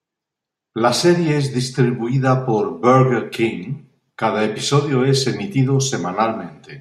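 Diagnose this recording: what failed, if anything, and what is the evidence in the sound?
Nothing failed; no stage of the chain shows a fault.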